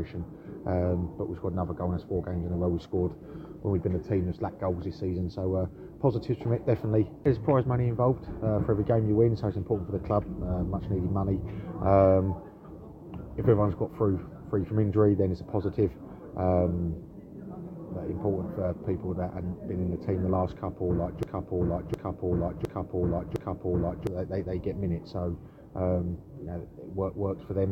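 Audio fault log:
21.23–24.07 s, broken-record loop: a 0.71 s fragment repeats four times back to back, identical on each pass, and the audio due in that span is lost, likely from a stalled stream resending its last buffer. The waveform and spectrogram show four matching blocks spaced 0.71 s apart.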